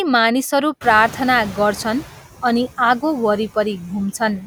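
Speech with noise suppressor artifacts throughout: the background is pulled down by about 9 dB, frame by frame, so it dips in the gaps and swells back under the voice. That breathing pattern, tied to the speech itself, is what separates it from plain room noise, which would sit at a steady level. A second fault, the noise suppressor catching up, runs from 0.81 to 2.08 s. The room noise jumps by about 21 dB at around 1 s, settling roughly 15 dB below the speech, and the suppressor's noise estimate is still tuned to the quieter background. The louder noise therefore comes through with less reduction at first and then fades over about 1.27 s as the estimate adapts, ending with a cut of about 7 dB. A fade that tracks the jump in noise level rather than the speech marks it as adaptation lag, not the ordinary frame-by-frame pumping heard elsewhere.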